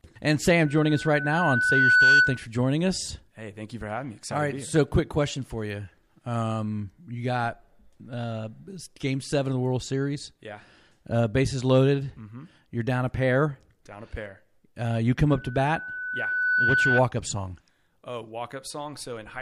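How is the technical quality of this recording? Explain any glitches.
The speech is marred twice by loudspeaker feedback squeal, a piercing 1.5 kHz tone that swells up over roughly a second and a half.

From 0.65 to 2.45 s, just before "joining us", it rises to roughly 10 dB above the speech. From 15.29 to 17.02 s, between "you come" and "up song", it peaks roughly 5 dB above. Both times, the microphone picked up its own loudspeaker, and the loop gain exceeding one at 1.5 kHz let that tone build on itself.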